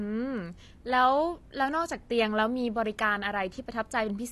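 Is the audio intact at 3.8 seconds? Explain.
No. At 3.8 seconds the speech carries the AAC compression damage present through the whole clip: dull, smeared, with a fizzy warble on sibilants, likely from AAC-LC at a low bitrate around 32 kbps. A spectrogram shows a hard ceiling with nothing above 12.1 kHz.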